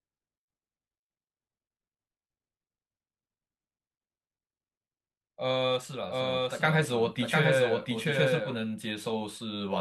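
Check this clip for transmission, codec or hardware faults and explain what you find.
One fault stands out. From 6.09 to 8.57 s the speech is heard twice, with a second, equally loud, full-band copy trailing roughly 0.7 s behind, dry and without room colour, cutting in and out abruptly. This doubled audio track likely comes from the same signal being captured again along a slower path, or from an edit holding two copies out of step.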